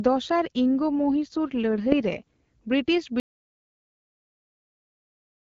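From 0.79 s to 2.22 s there is an AMR rate drop. The speech keeps the same bandwidth and never breaks, but it turns rougher and more synthetic, which fits the AMR-WB coder falling from 12.65 to about 8.85 kbit/s, with the freed bits going to error protection on a weak link. At 2.22 s the rate climbs back and the slight HD Voice coding texture returns.

At 3.2 s the audio cuts out mid-flow into an audio dropout to silence that runs to the end of the clip. The gap is silent with no room tone, so whatever came after is lost. This is likely an input lost to a disconnection or an accidental mute.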